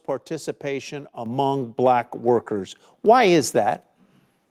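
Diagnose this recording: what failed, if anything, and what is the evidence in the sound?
The microphone volume stepped up at 1.26 s: the whole speech signal and its background noise jump by about 7 dB at once. This points to call processing, where the software judged the input too quiet and raised the device's input volume in a single step.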